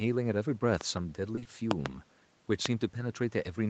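A voltage spike, likely from a plug, switch, static discharge or driver glitch, enters the speech signal at 0.81 to 0.99 s as a loud pop: two sharp thumps in quick succession, roughly 15 dB above the surrounding level, with the speech carrying on underneath.

Between 1.35 and 1.47 s, three back-to-back stretches of call audio arrive too late for the Opus decoder. This is short concealed packet loss. In each stretch the receiver invents about 20 ms of audio by extending the preceding sound before blending back into what really arrived. The three patches run together into a brief smeared, wobbling moment in the speech, against the 8 kHz band limit of the call path.

A second loud pop, likely from the same kind of electrical transient, comes at 1.71 to 1.88 s. It is again a double thump, louder this time at roughly 20 dB above the speech.

The last pop, at 2.66 to 2.68 s, is a single sharp crack that stands roughly 25 dB above the signal. 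Its likely cause is again a sudden voltage step whose edge the downstream circuitry turns into an abrupt click on top of the ongoing sound.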